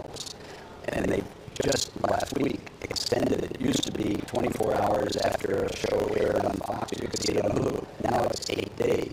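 From the start, the writing side and the reading side of the playback ring buffer have drifted out of step, so they cross inside every period. That is buffer tearing. Roughly half of each buffer still carries audio left from the previous pass, around 70 ms stale, butted against fresh material with hard joins at both edges. Those joins repeat at 25 Hz, giving a continuous rough rattling buzz that rides on the sound and drops away whenever the signal does.

At 6.55 s the level steps down abruptly by about 5 dB and holds there until 6.73 s. This is a sudden gain jump, most likely a digital gain setting or bit shift applied without a ramp. Because the change lands between adjacent samples, the sound and its background noise drop together in a single step rather than fading, so the transition is heard as a blunt, momentary dip in loudness.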